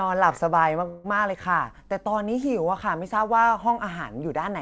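Call audio freeze at 0.88 to 1.06 s: the speech stalls into 162 ms of fading buzz, likely a drained jitter buffer, then resumes with nothing lost.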